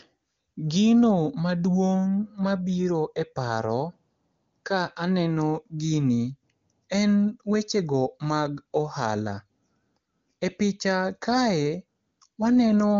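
No audible technical faults.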